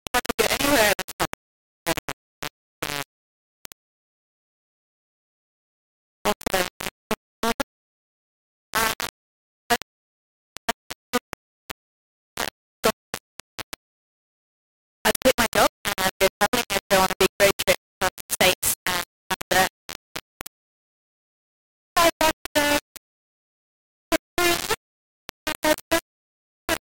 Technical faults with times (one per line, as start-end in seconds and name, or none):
0.00-26.85 low bit depth without dither